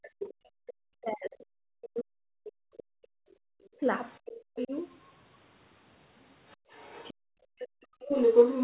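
From 0.0 to 3.16 s the echo canceller likely could not separate near-end speech from loudspeaker echo, so speech is suppressed in double talk: about 3 s of dips reaching roughly 40 dB. Within that, at 0.19 to 0.33 s, the other side's voice leaks through, roughly 10 dB below the speech. Leakage returns from 3.29 to 4.68 s at roughly 15 dB down. At 3.44 s the canceller clamps the microphone, and the background is gated by the echo canceller for 50 ms, dropping about 37 dB. From 3.77 to 4.73 s double-talk suppression recurs, with about 0.4 s of speech pushed down roughly 40 dB. From 6.49 s to the end, leaking far-end voice sits roughly 5 dB above the speech, and between 6.57 and 8.0 s the background gating cuts room sound by up to about 37 dB for about a second. The G.711 A-law call path limits everything to 4 kHz.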